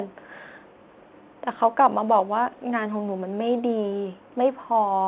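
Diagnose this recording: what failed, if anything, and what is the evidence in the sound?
Nothing here has failed: the speech comes across as ordinary telephone-band audio from the mu-law G.711 path at 8 kHz sampling, with no sign of trouble at any stage.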